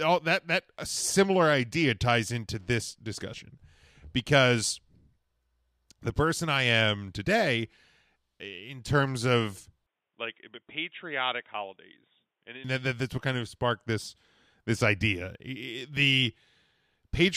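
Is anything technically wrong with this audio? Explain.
Yes. From 9.87 s to 12.64 s the speech turns dull and boxy, then clears again. Nothing above 3.8 kHz survives in that stretch. The level drops by roughly 5 dB, and a faint new noise floor appears well below the speech. There is no gap at either switch. This is likely an input switched to a poorer device. A second microphone or a headset's call profile passes a narrower band and brings its own tone, level and noise.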